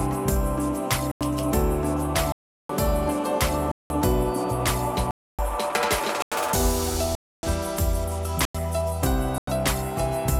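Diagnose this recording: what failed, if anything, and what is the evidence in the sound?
The failure is at the driver or buffer stage: eight blocks of digital silence, at 1.12–1.21 s, 2.32–2.69 s, 3.72–3.90 s, 5.11–5.39 s, 6.22–6.32 s, 7.15–7.43 s, 8.45–8.55 s and 9.38–9.47 s. Each lasts about 93, 186, 279 or 372 ms, multiples that fit whole 4096-sample buffers at 44.1 kHz left unfilled. The audio drops abruptly to nothing. A waveform shows flat strips, and a spectrogram shows empty vertical slots.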